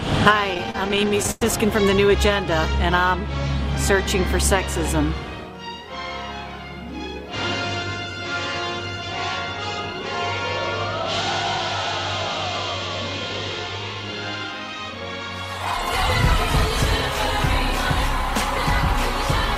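Computer activity noise runs through the whole clip. It is a buzz pulsing around 500 Hz, roughly 30 dB below the sound. Processor, graphics or mouse load is shifting the shared ground of the audio circuit. The buzz follows computer activity, not the audio.

Between 0.54 and 1.42 s there are repeated stalls (stutter). Packets arrived late, and the jitter buffer kept running dry. The receiver stretched the last sound to cover about 290 ms, a third of that span. The longest hold lasts 102 ms. The sound drags and stutters.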